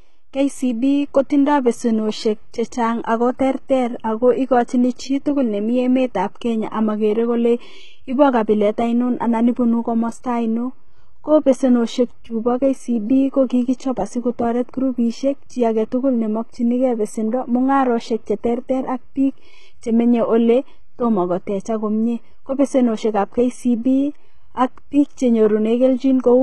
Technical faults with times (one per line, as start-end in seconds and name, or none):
0.00-26.43 HE-AAC compression